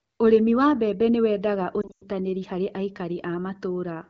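From 1.81 to 2.04 s, lost AMR speech frames: failed frames, including a 100 ms run, were concealed by extrapolation, so sound smears, fades, then returns rough. The spectrogram shows blurred, fading bands.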